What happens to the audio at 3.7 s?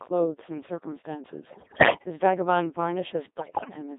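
At 3.7 s the sound is in the last moments of a burst of bit errors on digital voice radio, running from about 3.38 to 3.74 s. Around one bit in ten arrives flipped at the low-rate Codec 2 vocoder (2.4 kbit/s). Each corrupted bit sets pitch, level, voicing or spectral shape for a whole frame, so the synthetic output breaks into warbling bleeps and robotic gibberish. On a spectrogram the harmonic stack jumps abruptly between blocky frame-length segments, and the waveform shows stepwise level lurches.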